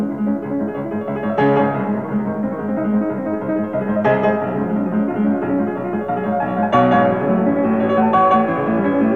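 No technical faults can be heard anywhere in this clip. Nothing in the audio calls for a time mark or a note of repair.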